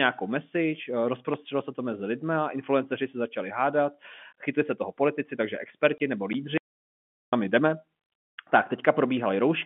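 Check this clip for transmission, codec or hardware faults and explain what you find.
Two faults can be heard in this speech, both brief silences close together, carried over a G.711 telephone path whose 150 Hz to 3.4 kHz band is audible throughout.

Packet loss filled with silence occurs from 5.98 to 6.00 s: a 20 ms hole with hard edges. That length fits a single lost 20 ms packet, with the receiver playing zeros in its place instead of concealing the gap. It differs from the later dropout in being exactly one packet long.

An audio dropout to silence runs from 6.58 to 7.33 s, about 0.75 s of silence with no room tone underneath, and the sound resumes abruptly mid-flow. The likely cause is the input being lost upstream, through a disconnected device, a failed link or a mute, while zeros kept being written. Unlike the packet gap, it is not a multiple of the 20 ms packet length, and whatever was spoken during it is gone.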